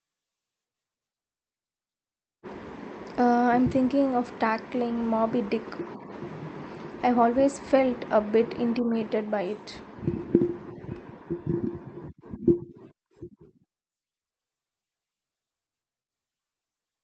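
No technical faults are audible.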